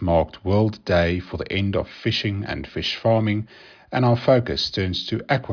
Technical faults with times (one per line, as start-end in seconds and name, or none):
none